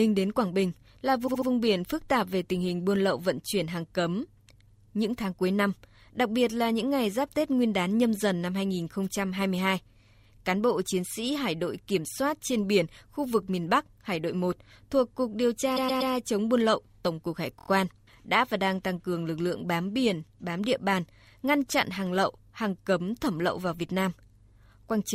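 Repeated frames break up this speech clip at 1.26–1.48 s, 15.76–16.12 s and 17.58–17.68 s, just before "biển phức tạp về", "chống buôn lậu" and "đã và đang tăng". A short block of compressed audio is decoded again and again: a 72 ms block three extra times, then a 120 ms block three extra times, then a 24 ms block four extra times. Each event is heard as a stutter that adds 216 ms, 360 ms and 96 ms to the clip.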